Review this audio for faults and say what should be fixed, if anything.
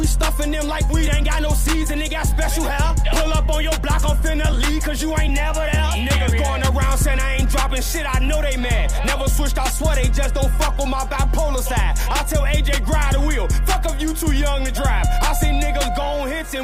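At 0.9 s there is a skip ahead. Roughly one and a half seconds of audio was dropped, and playback jumps forward with no gap.

Jitter buffer speed-up runs from 1.08 to 5.78 s at 105% speed, trimming about 200 ms. It recurs from 6.19 to 9.16 s at 103%, trimming about 100 ms. Short pitch-period pieces were cut repeatedly to drain excess buffered delay, so the audio hurries at unchanged pitch.

Fixing network jitter and sizing the jitter buffer to absorb packet bursts would prevent both the dropped stretch and the catch-up speed-ups.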